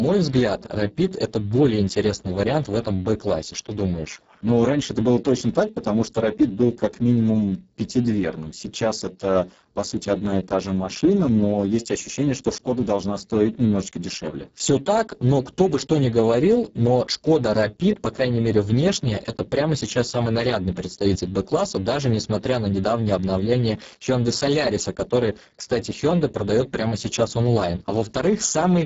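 Throughout the speech, Speex codec damage is heavy, consistent with roughly 6 kbps. Starved excitation leaves speech noisy and hoarse, with nothing above 7.7 kHz.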